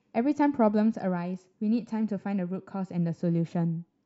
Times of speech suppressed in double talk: none

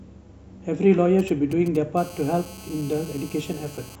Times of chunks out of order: none

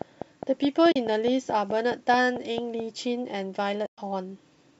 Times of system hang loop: none

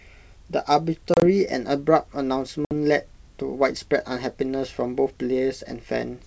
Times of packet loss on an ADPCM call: 1.14-1.24, 2.65-2.72

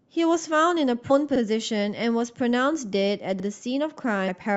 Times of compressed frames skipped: 1.09, 4.27

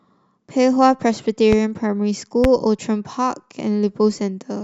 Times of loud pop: 1.53-1.55, 2.44-2.47

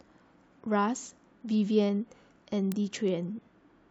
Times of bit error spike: 1.54, 2.72

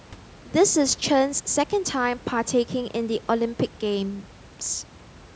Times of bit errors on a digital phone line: none

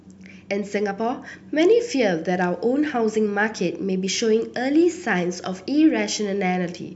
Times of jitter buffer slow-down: none

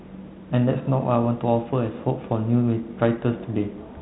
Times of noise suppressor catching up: none

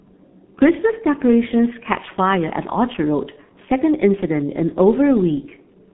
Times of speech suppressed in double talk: none

